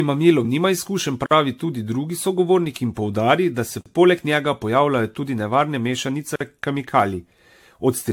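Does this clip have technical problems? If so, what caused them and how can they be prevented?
Yes. Throughout the speech there is a swirly, hollow smearing, with consonant attacks blurred and nothing above 19.3 kHz. That points to generation loss, likely from around ten successive AAC-LC encodes at roughly 96 kbit/s, each pass quantising on a shifted frame grid so the errors pile up. A single encode at that bitrate would sound far cleaner. The damage is cumulative, not a bandwidth limit. To prevent it, keep a lossless master and encode only once, at the end.

There is also a gap between chunks at 1.26, 3.81 and 6.36 s. Each is a silence of about 48 ms, spaced about 2.55 s apart, which fits audio handled in 2.5 s chunks with padding or a late start at each join. Unlike a dropout, no speech is missing: the sound resumes exactly where it stopped. To prevent it, join chunks gaplessly by trimming codec padding and scheduling each chunk to start the moment the previous one ends.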